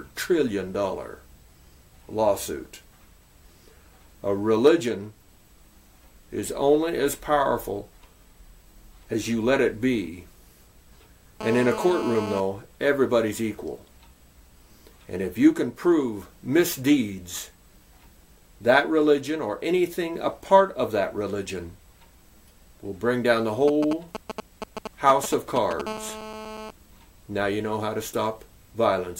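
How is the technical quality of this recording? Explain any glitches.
The recording has two kinds of interference from a nearby 2G mobile phone.

GSM phone buzz appears from 11.41 to 12.40 s and again from 25.87 to 26.71 s. A phone in a call transmits radio bursts about 217 times a second, and the audio circuitry demodulates them into the signal path. The result is a hard, raspy 217 Hz buzz full of harmonics and unrelated to the programme, sitting about 10 dB below the signal in the first stretch and about 12 dB below in the second.

GSM signalling bursts run from 23.68 to 25.82 s, just before the second buzz. Here the phone sends only short groups of radio bursts, the way a handset does when it exchanges control data with the network. The circuitry rectifies these into a galloping dit-dit-dit of ticks and brief 217 Hz buzzes, fairly prominent at only a few decibels below the signal.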